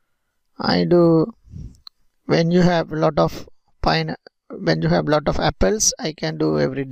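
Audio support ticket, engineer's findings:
No audible defect found on full review, so there is nothing to attribute to the capture, processing or playback chain.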